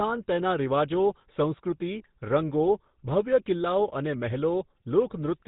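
From the very start to the end, the speech has been through the GSM full-rate codec, and the damage is plainly audible. This codec rebuilds the voice from a vocal-tract model fed by a sparse, regularly spaced pulse train, which fits the old 13 kbps rate. That's where the buzzy, gravelly grain comes from. The band also stops dead around 3.9 kHz, so there's no air or crispness up top.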